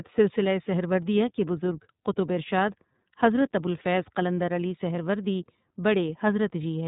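A speech recording that sounds slightly rough and synthetic throughout, with nothing above 4 kHz: the iLBC codec, narrowband VoIP coding whose character fits its 13.33 kbps, 30 ms-frame mode. From 2.0 to 2.03 s, just after "سلسلہ سہروردیہ کے بزرگ", a brief held, buzzy vowel sound replaces the speech: lost iLBC frames, here one 30 ms frame, concealed by repeating the last pitch cycle, with the voice right again almost at once afterwards.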